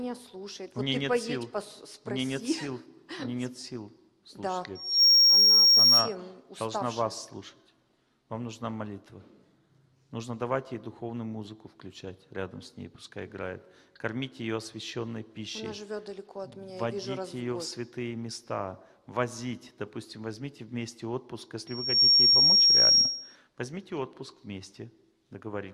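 There's loudspeaker feedback squeal in two spots, from 4.75 to 6.15 s and again from 21.67 to 23.36 s. Both times a single tone at 5.6 kHz swells up within a fraction of a second and sits well above the rest of the sound, roughly 15 dB louder. That's a mic hearing its own loudspeaker, with the loop gain topping one at that frequency, so it keeps building until the amplifier limits it or the loop gets broken.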